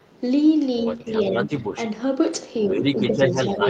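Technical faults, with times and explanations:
0.78–1.87 s and 2.58–3.69 s: other side's voice leaking through. A second voice sits under the talker. It is a little quieter than the talker in the first stretch and about as loud in the second, which runs to the end. This is likely loudspeaker playback that the echo canceller left in the microphone signal.
0.98–1.06 s, 1.29–1.34 s and 3.08–3.14 s: speech suppressed in double talk. The talker's voice briefly sinks by roughly 5 dB, each time for less than a tenth of a second, while the leaked voice is also sounding. This is likely the echo canceller turning everything down when both sides overlap.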